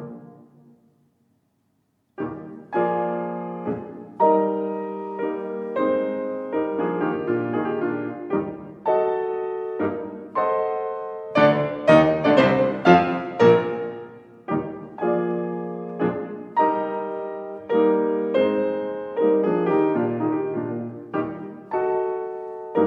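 No technical faults can be heard anywhere in the audio.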